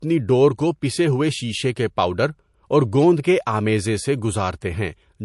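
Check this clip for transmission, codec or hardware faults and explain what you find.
One fault, throughout the speech: nothing above 11.3 kHz, which points to low-bitrate MP3 likely re-saved at a high bitrate; the re-encode cannot restore removed detail, leaving dull, band-limited sound.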